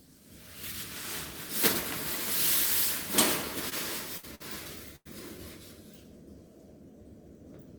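At 3.69–3.73 s, short concealed packet loss: 20 ms never arrived, and the receiver extended the preceding sound to fill the gap, leaving a brief smear. Bursts of packet loss follow at 4.17–4.25, 4.35–4.42 and 4.96–5.07 s. Each is bridged with a 55, 49 and 93 ms fading continuation, then the sound resumes with 60, 40 and 80 ms missing.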